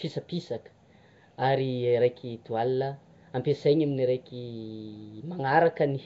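Nellymoser compression runs through the whole speech clip: a rough, hissy halo clings to the sound and everything is smeared with an underwater quality, while nothing is present above 7.7 kHz. The likely cause is the Nellymoser Asao codec, which codes short blocks at a fixed, coarse bit allowance, leaving weaker bands without bits and filling them with noise. The plainly audible damage fits a low rate around 32 kbps.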